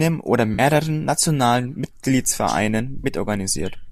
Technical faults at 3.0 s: AAC frame loss with concealment

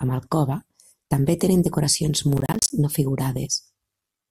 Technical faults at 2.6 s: processor overload crackle

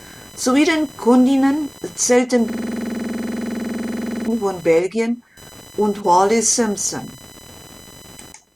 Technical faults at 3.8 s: computer activity noise; system hang loop

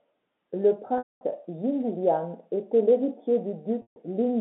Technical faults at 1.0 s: packet loss with pitch repetition

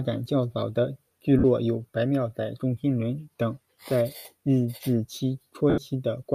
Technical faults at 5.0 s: none

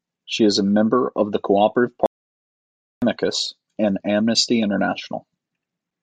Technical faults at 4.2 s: none

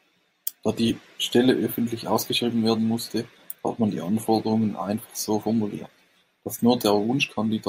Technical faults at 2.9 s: none

